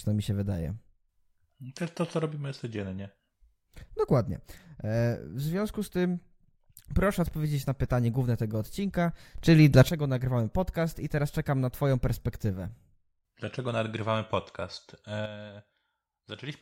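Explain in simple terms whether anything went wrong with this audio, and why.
The volume setting was likely changed in a single step instead of being eased in, causing a sudden gain jump. At 9.38 s the speech and its background noise leap much louder together until 9.89 s, and from 15.26 s to the end both drop clearly quieter.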